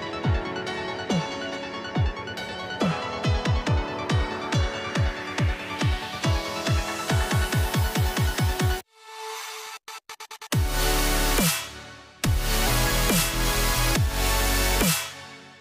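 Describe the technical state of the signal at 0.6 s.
At 0.6 s the signal is intact, with no dropout, distortion, glitch or other audible fault at that point.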